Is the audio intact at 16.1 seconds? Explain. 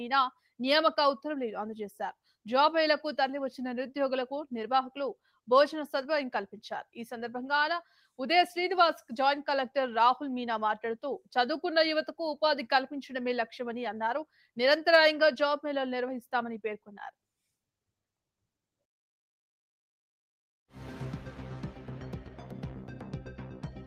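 Yes, the audio is intact at 16.1 seconds, with no fault audible at that moment.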